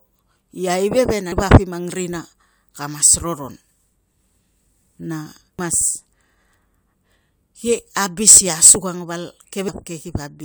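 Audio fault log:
1.32 s, 5.59 s, 9.68 s: compressed frames skipped. Whole frames go missing, so the sound jumps ahead about 300 ms, 300 ms and 150 ms (consistent with three, three and two 85.3 ms frames).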